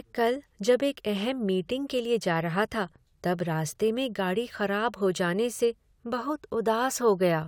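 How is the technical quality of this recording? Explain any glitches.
No glitches or faults are audible.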